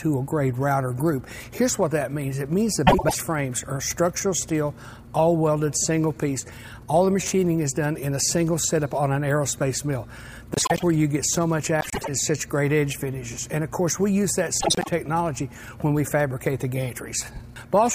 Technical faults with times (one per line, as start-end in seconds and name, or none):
2.87-3.15 frames out of order
10.54-10.83 frames out of order
11.80-12.08 frames out of order
14.60-14.88 frames out of order